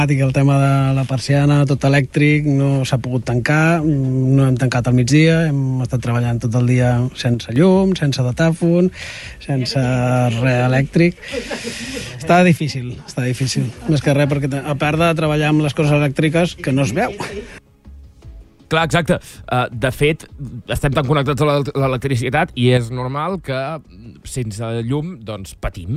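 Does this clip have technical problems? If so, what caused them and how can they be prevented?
Yes. One channel likely drops out at 7.34–7.56 s, 12.57–13.08 s and from 22.77 s to the end, so the mono sum falls abruptly by about 6 dB. Secure cables and connectors and monitor both channels while recording.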